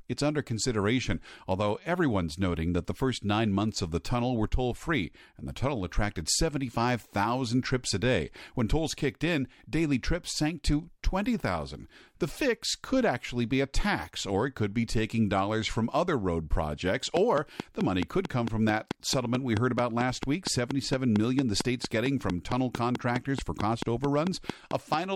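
From 17.17 s to 24.95 s, just after "from other road projects," a train of clicks runs through the speech at a steady 4.5 per second, some forty similar pops that keep ticking through the pauses and peak roughly 15 dB above the signal. The likely cause is electrical interference or a faulty connection or power supply injecting repeated pulses. On a waveform they appear as evenly spaced sharp spikes; on a spectrogram, as thin vertical broadband lines at regular intervals.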